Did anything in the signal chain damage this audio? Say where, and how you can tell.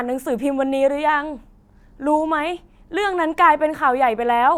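No, nothing in the signal chain audibly damaged this speech recording, and no stage from capture to playback left a mark on the signal.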